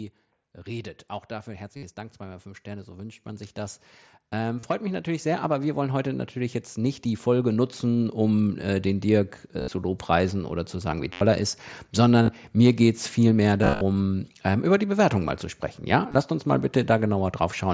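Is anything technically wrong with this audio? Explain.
Yes. Two faults are present.

From 0.64 to 8.26 s, automatic gain rising: the gain control judged the input too quiet and raised its gain by about 15 dB, slowly. Speech and background noise swell together over those seven-plus seconds, so the level creeps steadily upward.

Concealed Bluetooth headset packet loss occurs at 1.77–1.83, 4.59–4.64, 9.60–9.71, 11.13–11.21, 12.22–12.28, 13.62–13.81 and 16.09–16.18 s. Packets between headset and phone went missing, and the receiver filled each gap by repeating a recent stretch of waveform. The longer runs, such as 11.13–11.21 s, turn into a buzzy held tone with a warble as real speech resumes, all within the 8 kHz wideband headset range.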